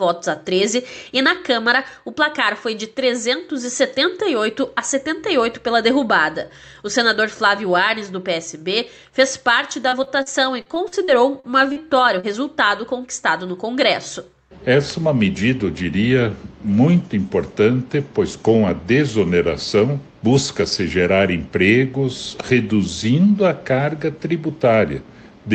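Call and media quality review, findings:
Choppy, robotic stretch, 9.83–11.79 s: ten short dropouts, longest about 42 ms, about 16% of the span patched over. Repeated packet loss (robotic sound) in the jitter buffer/decoder; each hole filled by extending the last sound, so the stretch comes out choppy with pieces missing.

Brief smear, 12.20–12.26 s: about 40 ms lost. Short concealed packet loss; the decoder continued the preceding sound, then blended back. Top end stops near 8 kHz, which fits an Opus call path.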